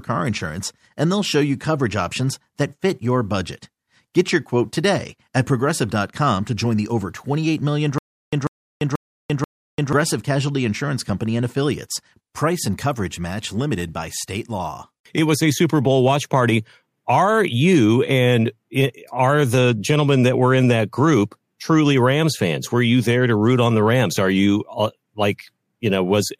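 From 7.98 s to 9.93 s the speech breaks into a stutter with silent gaps. A fragment about 144 ms long plays, then about 342 ms of digital silence follows, and the same fragment returns four times at a steady period of roughly 486 ms. This is likely a stalled player or stream that replayed its last buffered fragment at each retry before running dry. The audio due in that span is lost.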